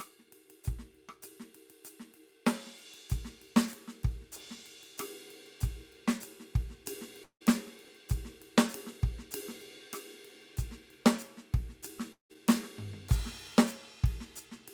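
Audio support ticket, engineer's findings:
Long network dropout, likely a stall in packet delivery, at 7.23 to 7.42 s and again at 12.12 to 12.31 s. About 180 ms of music never arrived each time. Receiver concealment extends the last sound for about 170 ms as a fading buzz, then drops to silence (90 ms at 7.23 s, 120 ms at 12.12 s). Playback resumes past the gap, with the missing music skipped rather than recovered.

Chunks out of order at 7.85 to 7.89 s. Stream reassembly or write-path error: one 10 ms chunk was written three chunks late and plays after material that should follow it. No audio lost, but the sequence is scrambled over those few tens of milliseconds. Three hard joins produce a brief jumbled stutter in the music, just after the first dropout.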